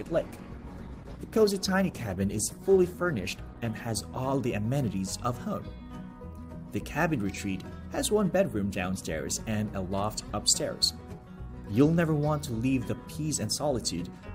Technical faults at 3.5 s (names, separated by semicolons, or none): adaptive stream starting at a low bitrate